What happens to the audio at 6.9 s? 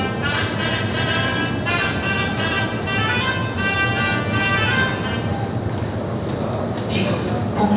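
Nothing goes wrong at 6.9 s; the sound carries on intact through that moment with no audible fault.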